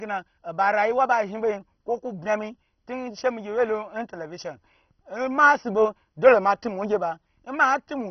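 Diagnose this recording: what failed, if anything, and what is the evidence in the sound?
Throughout, the speech is dull and granular, nothing above 6.1 kHz: likely heavy MP2 compression in the codec, bit-starved upper sub-bands switched off.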